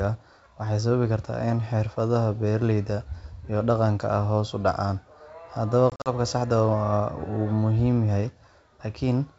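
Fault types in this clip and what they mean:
Packet loss on an ADPCM call: 100 ms of hard-edged silent holes over 5.90–6.12 s, longest 40 ms, seen as flat waveform gaps and blank spectrogram stripes.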